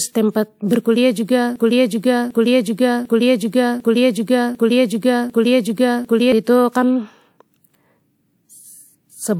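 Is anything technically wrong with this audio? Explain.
Yes, there is a broken-record loop from 1.56 s to 6.32 s. The player, encoder or stream likely stalled and kept sending out the last fragment it held. A 0.75 s piece of speech repeats exactly, back to back, six times, and the speech that should have played there is lost.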